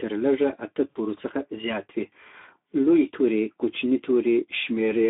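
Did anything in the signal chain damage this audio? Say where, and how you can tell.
Yes. At the codec stage, the speech went through Speex at a low setting, which fits a rate near 11 kbps. Too few bits reach the excitation, so the voice sounds hoarse and noisy throughout, confined to a narrow line band from about 250 Hz to 3.7 kHz.

At the network stage, packets were dropped between 0.90 and 0.97 s, after "تر لږه اته" and before "څخه زیات وي". The Speex packet loss concealment extrapolated from the last pitch and filter, lowering the gain frame by frame. That gap fits roughly three 20 ms frames, about 60 ms of lost audio.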